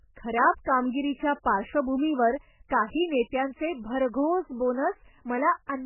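From start to finish the speech carries heavy damage from what is likely MP3 compression. Nothing survives above 3 kHz, so the treble is cut flat and consonants lose their edge. The encoder has too few bits to go round, which fits a very low bitrate near 8 kbps. Weak frequency components drop in and out between frames, leaving a watery, swirling texture, and attacks sound smeared.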